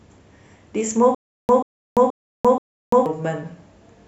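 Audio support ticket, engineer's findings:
Stutter with silent gaps, 1.15 s to 3.06 s. A 135 ms burst of speech repeats four times. Each repeat is followed by about 343 ms of digital silence, so the period is 478 ms. Likely cause: a playback or stream stall. At each retry the last fragment replays and then the buffer runs dry. The speech that belonged in that span is lost.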